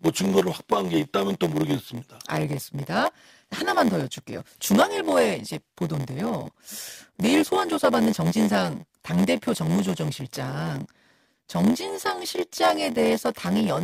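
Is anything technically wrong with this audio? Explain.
Yes. A block size mismatch (padded) runs through the whole speech clip. One processing stage hands over blocks shorter than the next stage reads, and the leftover part of each block is filled with silence. The buzz at 86.1 Hz fits a 512-sample read block. The regular gaps add a buzz at that rate under the speech, and the delivery runs slower, at 0.938 times normal speed, while the timbre stays.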